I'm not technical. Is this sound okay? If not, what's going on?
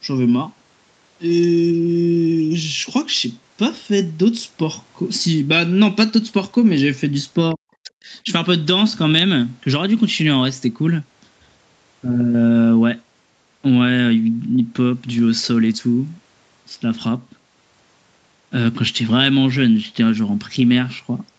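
No. Speech suppressed in double talk at 7.54 to 8.25 s: the voice nearly vanishes, likely because the call's echo canceller turned it down while both sides talked at once.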